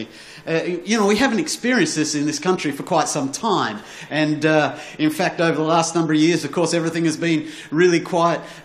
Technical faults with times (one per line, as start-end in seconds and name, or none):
none